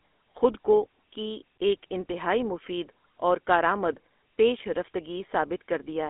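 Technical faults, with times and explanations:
Throughout, GSM full-rate codec. The speech has a plainly audible buzzy, gravelly roughness. This coder models the vocal tract as a filter and drives it with a coarse train of regularly spaced pulses, keeping only a third of the excitation detail, which fits a 13 kbps full-rate coder. That sparse excitation is what makes the voice grate. The band is narrowed to roughly 250 Hz to 3.5 kHz, and nothing at all survives above 3.8 kHz, so the sound is dull and boxy.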